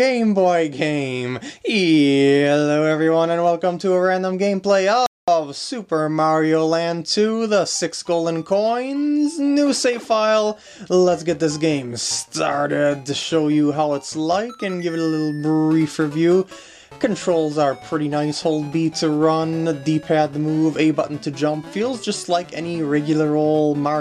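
At 5.06 s there is a playback stall, likely from the player running out of data, so the sound cuts to silence for about 214 ms before resuming at 5.28 s.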